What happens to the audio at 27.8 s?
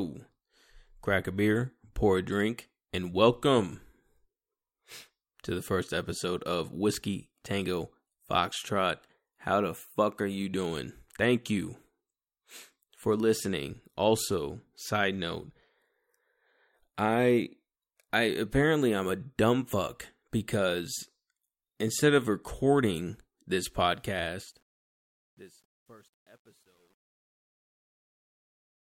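At 27.8 s the fade-out after "instead of recording this" shows truncation distortion on a fade, from 23.93 s to the end and worst from 24.82 s. Too few bits, which fits a 10-bit word length without dither, turn the quiet tail into gritty sound rather than a clean fade.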